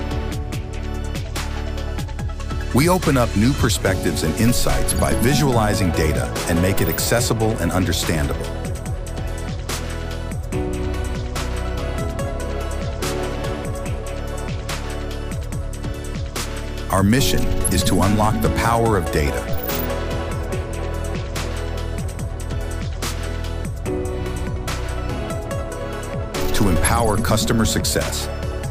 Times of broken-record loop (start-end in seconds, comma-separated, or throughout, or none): none